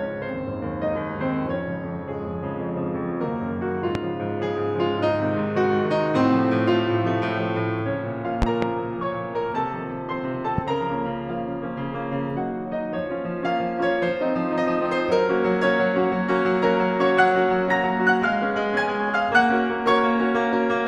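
Four loud pops cut through the music. The first comes at 3.95 to 3.98 s, about 15 dB above the music. At 8.42 to 8.65 s there are two pops in quick succession, the loudest at about 20 dB. The last is at 10.58 to 10.61 s, about 10 dB above. Each is a sharp thump, and the music carries on beneath. The likely cause is a sudden voltage step from a plug, switch or static.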